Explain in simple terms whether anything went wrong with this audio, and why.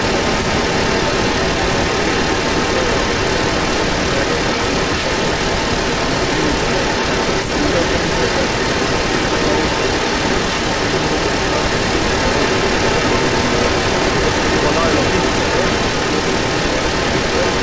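There's an echo leak running the whole way through, from 0 to about 17.6 s. A second copy of the speech trails the original by roughly half a second and comes through a bit louder than the voice itself. The likely cause is a speakerphone whose echo canceller let the sound back into the call.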